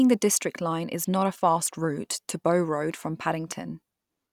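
A speech recording with a single loud pop from 3.52 to 3.54 s, a sharp transient that briefly rises a few decibels above the speech level while the talking continues underneath. The likely cause is an electrical pulse, such as a switch, plug contact or static discharge, entering the signal chain. On a waveform it appears as an abrupt spike standing out from the speech envelope. A spectrogram shows a thin vertical stripe spanning nearly the whole frequency range at that moment.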